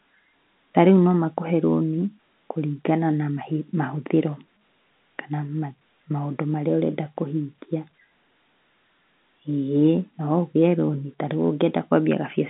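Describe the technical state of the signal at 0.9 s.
At 0.9 s the speech is intact, carried over G.711 A-law telephone coding at 64 kbps, which keeps the line band of roughly 150 Hz to 3.7 kHz and passes nothing above 3.8 kHz.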